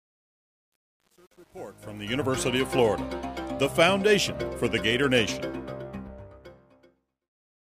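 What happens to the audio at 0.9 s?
At 0.9 s the audio is inside a fade-in affected by truncation distortion on a fade, which runs from the start to about 2.22 s and is worst up to about 1.96 s. The gain stage keeps too few bits and applies no dither, which fits roughly 9-bit resolution. While the level is this low, the waveform collapses into a few coarse square steps, so the sound is gritty.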